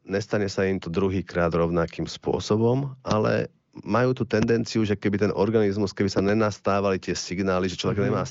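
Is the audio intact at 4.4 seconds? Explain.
No. A loud pop occurs from 4.42 to 4.45 s: a single sharp transient peaking roughly 15 dB above the speech, which continues underneath. It is likely a voltage step or pulse from a plug, switch, static discharge or driver glitch entering the signal path.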